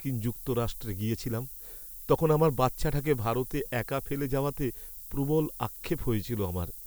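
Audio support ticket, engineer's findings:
Low bit depth with noise shaping, throughout speech. Steady thin hiss climbing sharply toward top of band, about 15 dB below signal. Quantisation near 7 bits, rounding error fed back and pushed upward. Spectrogram: constant noise floor brightening into highs; waveform: fine stepping.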